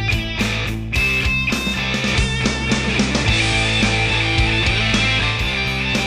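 At 1.92 s the receiver loses the digital stream and blends over about 214 ms to the FM analogue broadcast, returning at 5.48 s. Meanwhile the level shifts by about 2 dB, and hiss sits roughly 25 dB down.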